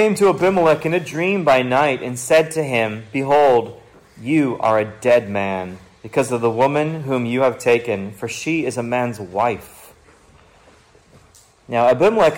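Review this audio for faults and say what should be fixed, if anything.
Hard clipping runs through the whole clip. Peaks are driven about 8 dB past full scale, so a small share of samples are cut flat, adding harsh crackle. Leave headroom by lowering gain before any converter or fixed-point stage.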